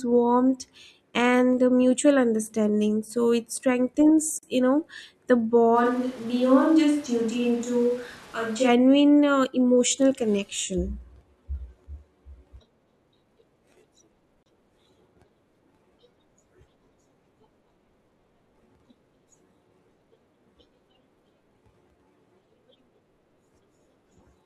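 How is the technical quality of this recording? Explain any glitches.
The recording has two kinds of glitch: brief dropouts at joins, and a stretch where the speech suddenly sounds far away.

At 4.39 s and again at 14.43 s, the speech cuts to silence for about 41 ms and 31 ms, with smeared edges, then resumes where it left off. The two are 10 seconds apart. This is a gap at a join of encoded pieces: the audio was encoded in separate segments and spliced without trimming the encoder's leading delay and last-frame padding, so that silence remains at each seam.

From 5.77 s to 8.67 s, the speech turns hollow and roomy, loses bass, drops about 5 dB in level, and carries audible room noise roughly 25 dB below the speech. It snaps back abruptly at the end. This is most likely a switch to a distant microphone, where the close mic's signal dropped out and a farther microphone, such as a camera's, filled in for those three seconds.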